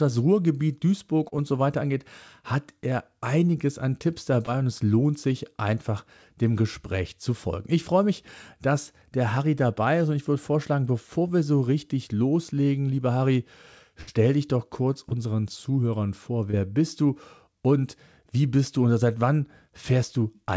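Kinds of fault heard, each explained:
Short concealed packet loss: Brief smears or wobbles at 1.28, 4.46, 15.09 (just after "dich doch kurz") and 16.51 s (just before "bist du und wie"), each lasting only a few hundredths of a second. About 20 to 40 ms of audio failed to arrive in time each time, and the receiver papered over the hole by extending the preceding sound before blending back into the real signal.
Burst of packet loss: At 14.01 to 14.09 s, right before "dich doch kurz", the last sound is held and fades for roughly 60 ms, then the audio picks up further along. Several consecutive packets were lost or arrived too late, so the receiver stretched and attenuated the final sound it had, and the portion in between is simply gone.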